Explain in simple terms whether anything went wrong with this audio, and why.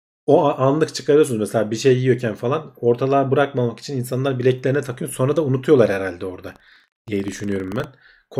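Something did go wrong between 6.44 and 7.85 s: buffer tearing. The program filling the playback buffer and the hardware reading it slipped out of step, so a tiny sliver of each chunk replays speech from a moment earlier. That causes a rough 25 Hz buzz, which fits a 40 ms buffer.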